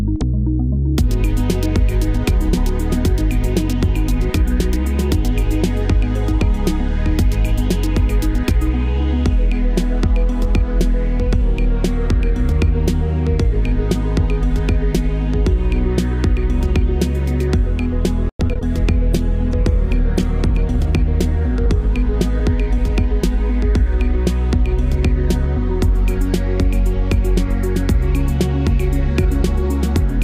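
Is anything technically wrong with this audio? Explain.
Yes, three faults cluster between about 18 and 23 s of the clip.

Repeated packet loss (robotic sound), 18.29 to 18.63 s: packets kept going missing, and each hole was patched by extending the preceding sound. Nearly half of this short stretch is concealed rather than received, with the longest hole about 100 ms, so the audio turns choppy with pieces missing.

Call bitrate drop, 19.1 to 22.69 s: the sender's bandwidth estimate collapsed, and the encoder coded far more coarsely, consistent with a fall from around 128 kbps to around 15 kbps. For about 1.3 s at the worst point the audio sounds rough, watery and dull, with the high frequencies cut off, before quality returns.

Jitter buffer speed-up, 21.40 to 23.13 s: the receiver was holding more audio than it wanted, so it trimmed small pitch-period slices again and again to shrink the backlog, removing a few tens of milliseconds in total. 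Playback runs about 2% fast at unchanged pitch.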